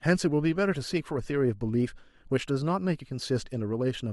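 Speech with no audible faults.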